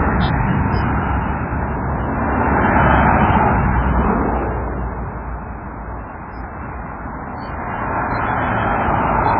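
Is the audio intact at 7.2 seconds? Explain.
No. MP3 compression runs through the whole clip, including 7.2 s, with nothing above 5.2 kHz. The heavy damage likely comes from a very low bitrate, around 16 kbps: the encoder drops the treble and lets weak frequency lines flicker between frames, giving a watery, swirly sound with smeared attacks.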